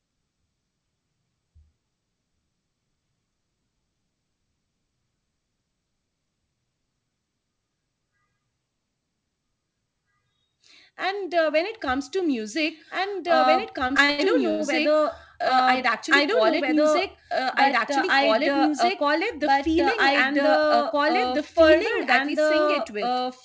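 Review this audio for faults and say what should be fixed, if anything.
Doubled audio track, throughout: an equally loud, full-band copy of the speech trails by about 2 s, likely from a second, slower capture path. It has no decay or room colour, unlike an echo.

Repeated stalls (stutter), 13.88–14.61 s: the jitter buffer ran dry five times, with the longest gap 86 ms. The receiver stretched the last sound over about 231 ms, so nothing is lost, unlike dropouts.

Jitter buffer speed-up, 16.72–17.91 s and 18.34–19.19 s: the speech plays at 104% speed with unchanged pitch as the buffer trims backlog, removing roughly 50 ms and 40 ms.

To prevent these, remove the duplicate capture route, and steady the network delivery feeding the G.722 call path so the jitter buffer neither starves nor overfills.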